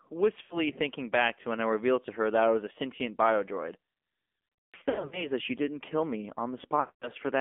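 The speech passes through an AMR narrowband mobile codec at a low bit rate, which fits a mode near 7.4 kbps. The line passes roughly 250 Hz to 3.5 kHz, and the voice sounds plainly buzzy and synthetic throughout.

From 0.42 to 0.67 s, just before "thinking back to when", lost AMR speech frames make the decoder repeat stale pitch and vocal-tract settings for about 80 ms, giving a brief smeared dip.

From 4.65 to 5.31 s, before "that she didn't kill", about 420 ms is lost in scattered runs of up to 80 ms, so the sound warbles and stutters repeatedly.

From 6.80 to 7.10 s, after "she didn't kill me", about 220 ms drags out and fades toward silence.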